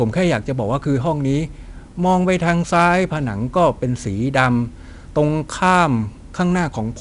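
A speech recording carrying 4-bit ADPCM compression from start to finish, with plainly audible codec damage. Each sample is coded as a coarse 4-bit step from a predicted value, and the step size adapts to the signal, so the quantisation error is a gritty, level-following hiss that rides on every loud passage and roughens sharp onsets where the step lags. Nothing reaches above 10.6 kHz, which points to a sample rate near 22 kHz and a data rate of about 88 kbps.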